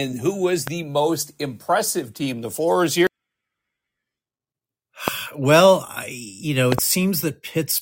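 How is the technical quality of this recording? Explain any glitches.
The recording has three loud pops, each a sudden voltage pulse, likely from a plug, switch, static or driver glitch, riding on top of the speech, which continues beneath them. The first, at 0.67–0.70 s after "who was", peaks roughly 15 dB above the speech. A single pop at 5.08–5.10 s, just before "well I you know", and a double pop at 6.72–6.81 s, after "well I you know", each reach roughly 20 dB above it.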